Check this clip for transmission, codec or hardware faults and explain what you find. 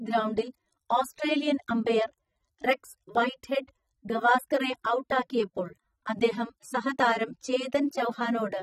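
One codec fault runs through the whole clip. AAC compression likely squeezed the speech to a low bitrate, around 24 kbps judging by the damage, discarding spectral lines it judged inaudible. Nothing survives above 15.9 kHz, and sibilants and held sounds come out dull, smeared and warbling.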